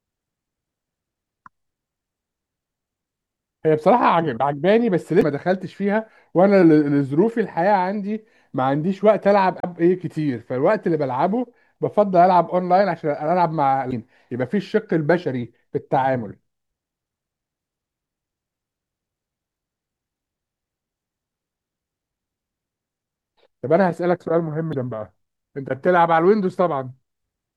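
Damaged data in a compressed stream makes the decoder misread frames and lose sync, producing brief glitches of about 40 ms at 5.19, 9.60, 13.89 and 24.70 s.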